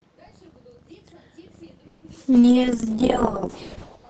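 From 1.87 to 2.04 s the sound stalls into a fading buzzy continuation for about 150 ms, then resumes exactly where it stopped. This is a call audio freeze, likely from packets held up in transit and an emptied jitter buffer. Unlike packet loss, nothing is skipped: the later audio is simply pushed about 150 ms later.

At 2.14 to 2.17 s comes a short concealed packet loss: about 20 ms of audio never arrived in time, and roughly 10 ms of extrapolated sound bridges the hole before blending back. It is heard as a brief smear or wobble, and that fragment is actually gone rather than delayed.

From 2.32 s to the end, a call bitrate drop takes the Opus stream from 40 kbps down to 6 kbps, staying at the lowest rate for about 1.15 s. The sound turns rough and watery and loses its top end, sitting duller than the earlier audio, which reaches up to 8 kHz. It differs from the two brief faults above because the degradation persists rather than passing in a fraction of a second.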